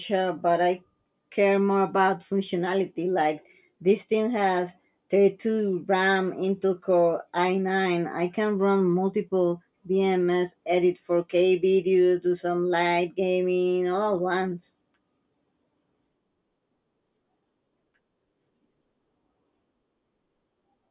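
Nothing here calls for comment, since the speech runs along without any technical fault to point out at any moment.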